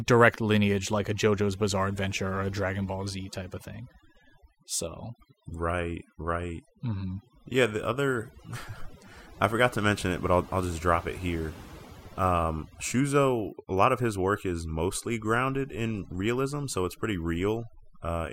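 Overdone noise removal runs through the whole speech clip: an over-aggressive noise reducer cuts frequency bands near its noise estimate, leaving twinkling near-silence between phrases and the quiet parts of the voice cut away.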